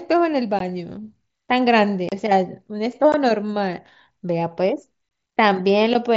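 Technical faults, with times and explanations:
0.59 s, 2.09–2.12 s, 3.12 s and 5.09–5.11 s: unconcealed Bluetooth headset packet loss. Headset voice packets were lost and nothing filled the holes, so the speech cuts to silence for 15 to 30 ms with abrupt edges, consistent with two to four missing 7.5 ms mSBC frames.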